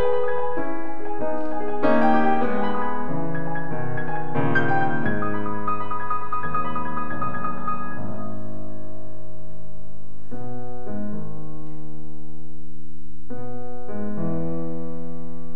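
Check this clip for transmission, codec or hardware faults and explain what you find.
One fault runs through the whole music clip: a DC offset of about -16 dBFS. A constant shift displaces the waveform from zero, wasting headroom; unlike hum, there's no audible tone, only fixed energy at 0 Hz.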